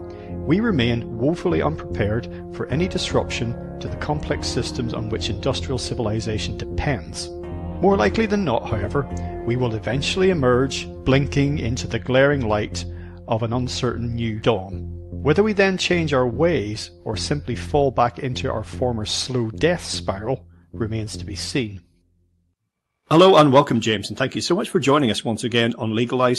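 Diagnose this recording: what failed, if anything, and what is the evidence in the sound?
Nothing failed, and the sound shows no evidence of a fault; the call path it came through, an Opus codec at 40 kbps with the top of the band at 12 kHz, is working as intended.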